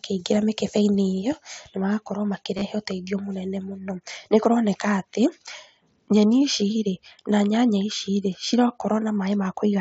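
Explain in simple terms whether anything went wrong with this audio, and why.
Around 2.57 to 2.65 s and again at 9.44 s there's concealed Bluetooth headset packet loss: brief audio dropouts between headset and phone, patched over with repeated recent sound. The patches are short, and the single one at 9.44 s is nearly hidden.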